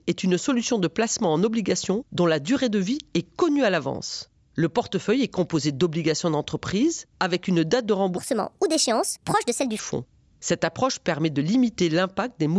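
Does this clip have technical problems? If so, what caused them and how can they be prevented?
Yes. From 8.17 to 9.79 s, just after "avec une date de", there is a wrong sample rate fault. The speech was played back faster than it was captured with no conversion, which fits 16 kHz audio being clocked out at 22 kHz. It runs 1.38 times fast and about 5.5 semitones high, so it sounds rushed and squeaky. To prevent this, check that the playback rate matches the recorded rate, or resample explicitly wherever the two differ.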